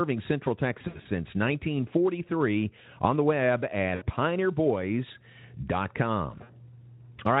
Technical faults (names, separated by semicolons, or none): VoIP packet loss concealed by the speech codec